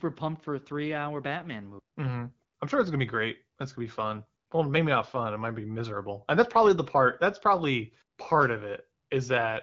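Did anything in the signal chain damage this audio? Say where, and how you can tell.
No, nothing in the signal chain stood out as damaging this speech on listening.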